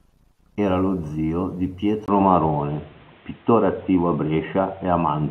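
At 2.06 s, just after "lo zio di", the input likely switched to a poorer device passing nothing above 4 kHz. After a 20 ms gap the speech turns dull and boxy, about 5 dB different in level, over new noise about 30 dB down.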